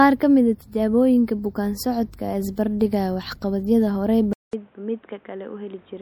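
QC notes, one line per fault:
Throughout: MP3 compression, plainly audible; watery, swirly artefacts likely come from a low-bitrate encoder, consistent with about 64 kbps, zeroing weak frequency lines frame to frame.
4.33–6.01 s: input switched to a poorer device, likely; after "dhigaya waxqabadyada" a 200 ms gap, then nothing above 3.8 kHz, level down about 5 dB, new noise roughly 30 dB below.
4.51 s: pre-echo; a 17 ms hiss precedes an attack because quantisation noise sized for the loud part spreads across the quiet moment before it.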